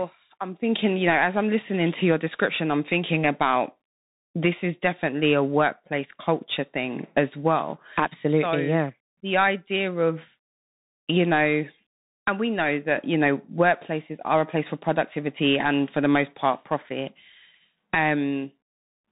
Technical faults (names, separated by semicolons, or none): Bluetooth CVSD headset codec